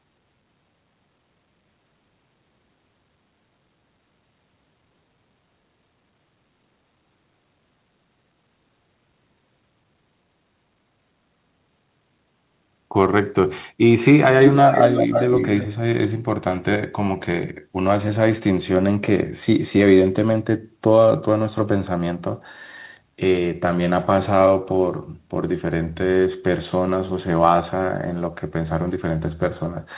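Echo leak from 14.67 to 15.68 s in this speech clip: a delayed copy of the talker returns about 0.32 s behind the original, roughly 5 dB quieter than the direct voice. This is likely a loudspeaker on one side whose echo canceller failed to remove the pickup, sending it back down the line. The whole clip is band-limited to 4 kHz, which fits a G.711 telephone codec.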